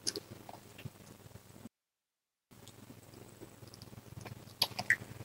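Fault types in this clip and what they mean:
Audio dropout to a faint residue: at 1.67 s the sound cuts off abruptly, mid-flow, and returns just as suddenly at 2.51 s. For about 0.84 s, only a low hiss remains, roughly 50 dB below the normal signal level. The break is hard-edged rather than a pause or fade. The likely cause is that the wanted signal was lost for that stretch while the path after the break stayed live and passed only its own noise.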